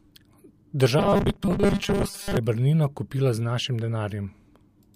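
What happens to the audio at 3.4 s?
Nothing goes wrong at 3.4 s; the speech carries on intact through that moment, with no dropout, click or other fault.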